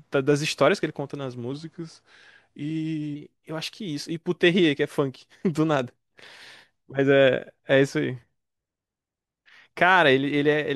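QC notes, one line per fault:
1.52 to 3.16 s, wrong sample rate: the speech drops into a slightly lower, slower register, about 1.5 semitones down and running at roughly 92% of normal speed, then snaps back. Pitch and tempo shift together by the same ratio, which is the signature of samples played out at a lower rate than they were captured at, with no conversion. The 0.919 ratio fits 48 kHz material being clocked out at 44.1 kHz.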